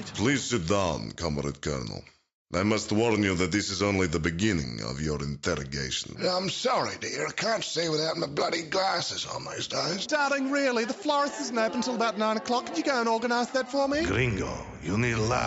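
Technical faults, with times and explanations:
No technical faults detected.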